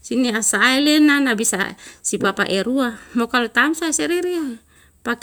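Nothing in this bit of speech stands out as a technical problem; it just runs along without any glitches to point to.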